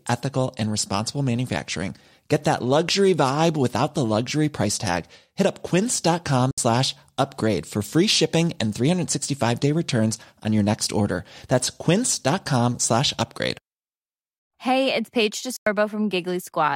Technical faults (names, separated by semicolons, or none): digital broadcast dropout